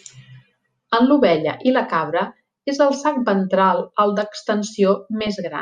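A speech recording with DAB burbling from 5.2 to 5.37 s: short noise blips in single sub-bands as residual bit errors from weak reception corrupt MP2 sub-band samples. A spectrogram shows isolated bands flickering in level, block by block, matching roughly eight damaged frames.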